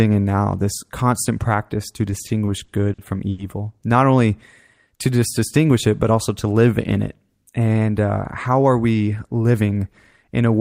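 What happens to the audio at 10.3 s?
At 10.3 s the speech carries on intact, with no dropout, click, distortion or other fault at that point.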